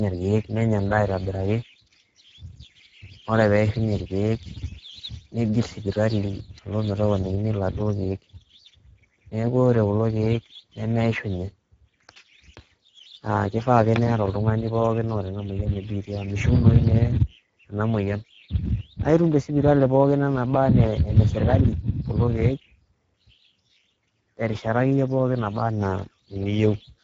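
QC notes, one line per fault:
throughout: Speex codec, speech plainly hoarse and noisy from a starved CELP excitation, top band only shaped noise fill to 7.7 kHz, which fits roughly 10 kbps.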